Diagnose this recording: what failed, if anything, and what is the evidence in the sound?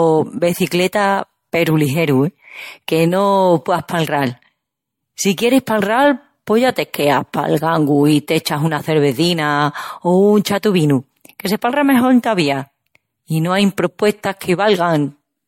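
Generation loss throughout, a codec-stage fault: the speech sounds swirly, hollow and smeared with blurred attacks and nothing above 16.6 kHz, likely from around five successive MP3 re-encodes at 64 kbit/s.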